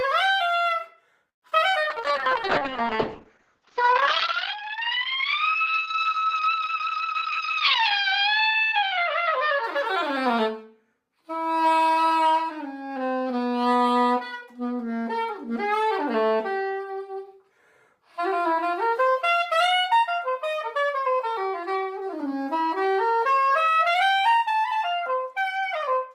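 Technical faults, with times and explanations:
1.29–1.64 s, repeated packet loss (robotic sound): four gaps, longest 129 ms, about 42% of the stretch patched by extending prior sound, so it turns choppy and robotic.
1.70–2.28 s, jitter buffer slow-down: the receiver repeated tiny pitch-period slices, adding 55 ms, so the audio plays at 91% speed with drawn-out sounds at unchanged pitch.
1.90–10.2 s, call bitrate drop: the encoder fell from 32 to 7 kbps for about 3.6 s at the lowest, bandwidth cut from 20 kHz to 8 kHz, sounding muffled and rough.
7.82–9.76 s, jitter buffer speed-up: short pitch-period pieces, roughly 150 ms in total, were removed to shrink the buffer, so the sound runs hurried at 106% speed.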